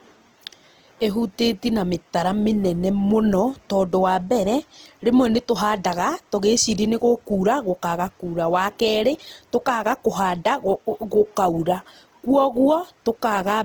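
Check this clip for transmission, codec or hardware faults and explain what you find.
One codec fault runs through the whole clip. Throughout, the speech sounds grainy and rough, with noisy fill in the highs up to 20.2 kHz, likely from Opus compression at a bitrate near 16 kbps.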